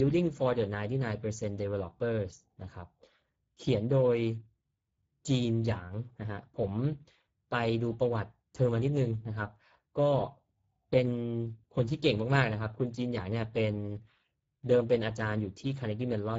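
Speech encoded throughout with the Speex codec at a low setting, which fits a bitrate near 10 kbps. The voice sounds noisy and hoarse, and nothing remains above 7.7 kHz. Unlike MP3's warbling swirl, this damage is a gritty buzz in the excitation.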